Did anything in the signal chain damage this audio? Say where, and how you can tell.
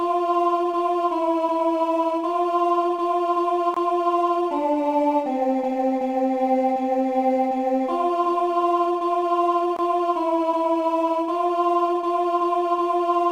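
Yes. Two gaps between chunks damage the audio at the playback or storage stage. The sound drops to silence from 3.74 to 3.77 s and again from 9.77 to 9.79 s. Each hole lasts about 23 ms. The two holes are exactly 6.0 s apart, which points to audio handled in 6-second chunks. Silence is inserted at each join, from padding or a late chunk start. Nothing is lost, but the flow breaks.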